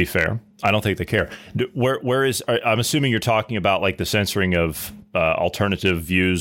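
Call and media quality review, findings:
Hard clipping on speech peaks, 0.00–0.24 s, 0.66–0.70 s, 3.67–3.89 s, 4.54–4.56 s, 5.86–6.18 s. Brief crackle on loud syllables. Probable gain stage or converter overdriven by about 1 to 3 dB; flattened peaks add high harmonics.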